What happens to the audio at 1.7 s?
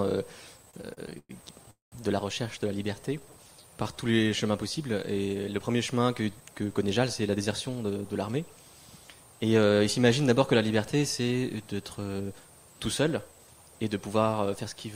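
At 1.7 s a run of repeated stalls (stutter) hands over to a call audio freeze. From 0.57 to 1.69 s, packets kept reaching the receiver later than the audio was being played, so its jitter buffer emptied 14 times. Each time it stretched the last sound to bridge the wait, about 274 ms in all and a quarter of that span, with the longest gap 112 ms. Nothing is lost, but the sound drags and stutters.

Then, from 1.71 to 1.94 s, the audio stops moving. The likely cause is packets held up in transit long enough for the buffer to run dry altogether. The receiver extends the last sound briefly, then fades into about 160 ms of silence, 212 ms filled in total. When the audio resumes, it carries on from where it halted, now running 212 ms later than before, with nothing missing.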